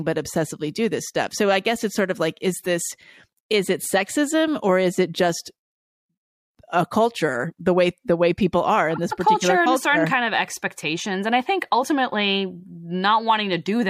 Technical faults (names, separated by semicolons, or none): none